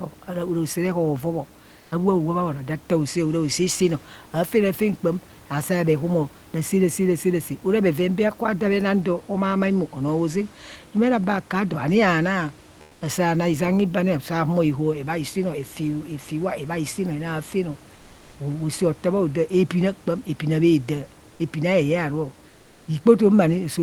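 Speech recorded through a call path, with the real room background replaced by comfort noise in two pauses: 17.95 to 18.31 s and 22.51 to 22.87 s, about 0.36 s each. In both gaps the background, roughly 30 dB below the speech, gives way to a flat, featureless hiss about 3 dB and 2 dB quieter, likely from Opus discontinuous transmission switching off during silence and the receiver synthesising noise.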